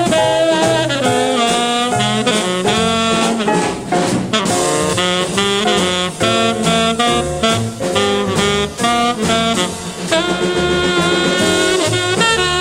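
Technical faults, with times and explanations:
No technical faults are audible anywhere in the recording.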